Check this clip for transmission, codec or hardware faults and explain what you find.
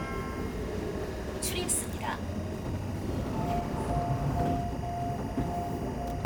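Three faults are present: a continuous timecode bleed, a skip ahead at 1.67 s, and a jitter buffer speed-up from 1.81 to 3.71 s.

Timecode bleed runs through the whole clip. Linear timecode from an adjacent track or cable has leaked into the audio path, adding a square-wave code that flips between tones around 1 and 2 kHz. The result is a steady chirping warble about 20 dB below the sound, and its pattern fits 23.976 fps code.

The skip ahead happens at 1.67 to 1.69 s. Roughly 0.7 s of audio was discarded while later material was already queued, possibly by an overflowing jitter buffer. Playback lurches forward with no silence, and the sound on either side is butted together almost seamlessly.

The jitter buffer speed-up follows from 1.81 to 3.71 s. With excess audio held in the buffer, the receiver repeatedly cut out short pitch-period pieces, about 0.2 s in total, to bring latency down. 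The sound plays at 111% speed without changing pitch, so this stretch feels rushed.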